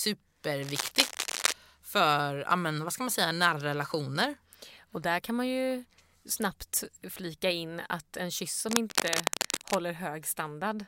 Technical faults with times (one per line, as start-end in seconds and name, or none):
0.62-1.52 cable scratch noise
8.69-9.78 cable scratch noise